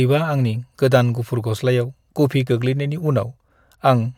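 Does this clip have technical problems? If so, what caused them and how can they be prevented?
No, there are no technical problems to point to in this clip. Nothing in the audio calls for a cause or a fix.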